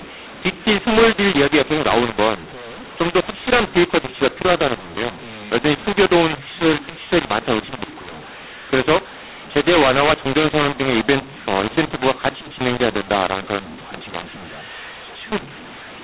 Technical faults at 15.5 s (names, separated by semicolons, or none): mu-law and A-law mixed up